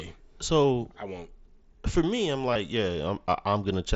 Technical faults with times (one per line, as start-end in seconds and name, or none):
2.53-2.56 concealed Bluetooth headset packet loss